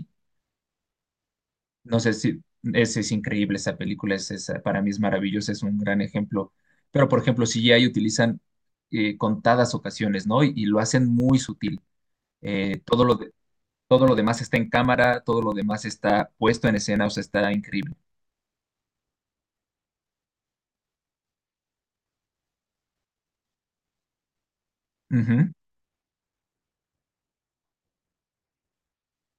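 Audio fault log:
11.2–18.69 s, periodic USB or driver dropouts: a regular train of small ticks, one every 0.096 s, runs through the speech across this span. At that fixed interval something on the system stalls the USB bus or audio driver, and a few milliseconds of audio are skipped outright rather than replaced with silence, so the waveform jumps ahead to later material and each join clicks. The ticks sound only where there is signal.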